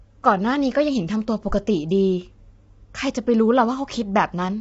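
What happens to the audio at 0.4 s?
At 0.4 s, as throughout the clip, the speech sounds rough and grainy, with noise filling the gaps between harmonics and nothing above 7.8 kHz. This is likely low-delay AAC compression: short frames resolve pitch poorly, and the plainly audible damage fits a bitrate near 24 kbps.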